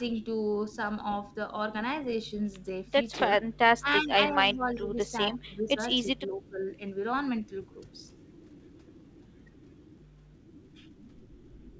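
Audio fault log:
3.38–3.54, 3.79–4.15, 4.32–5.0, 5.35–5.79 and 6.15–6.61 s: speech suppressed in double talk. The talker dips roughly 10 to 20 dB in chunks, likely the echo canceller ducking everything while the far end talks.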